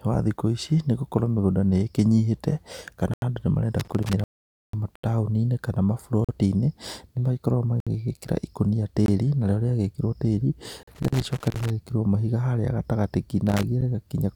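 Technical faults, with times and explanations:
3.14–3.22, 4.95–5.04, 6.25–6.29, 7.80–7.87, 9.06–9.08, 10.83–10.87 and 13.81 s, block of digital silence: the audio drops to silence for 10 to 85 ms and returns with no fade. Lengths of 85, 43 and 21 ms fit unfilled 4096-, 2048- and 1024-sample output buffers at 48 kHz.
3.80–4.13, 10.72–11.70 and 13.47–13.63 s, loose connector crackle: a contact that keeps making and breaking chops the signal into irregular bursts of scratchy crackle. The longest burst runs nearly a second.
4.24–4.74 s, rebuffering stall: playback stops for about 0.49 s because the player ran out of buffered audio, then resumes exactly where it left off. No sound is lost, but the pause stretches the timeline.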